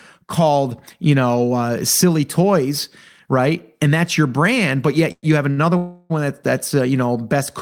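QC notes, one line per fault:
5.12–5.25 s, call audio freeze: the sound hangs for about 107 ms. The last sound carries on as a fading buzz or hiss and drops to silence for roughly the final 30 ms before the speech picks up again exactly where it left off. Nothing is lost, but a gap has been pushed into the timeline. The likely cause is packets getting held up in transit and the jitter buffer running dry, so the receiver filled the gap.
5.51–5.59 s, short stall from a late packet: a brief 64 ms stretch where the last sound is held too long, with a slight buzzy dip. A packet missed its slot, the receiver drew out what it already had until the packet turned up, and then carried on from the same spot. No audio is missing, just a small added delay.
5.77–6.12 s, call audio freeze: a longer hang, about 328 ms. The fill never goes silent here, so it's a drawn-out, decaying buzz or hiss before the speech resumes right where it paused. 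Again nothing is skipped, and the overall delay grows by that full 328 ms. It's likely the same cause, with packets held up and the buffer emptying, only for longer this time.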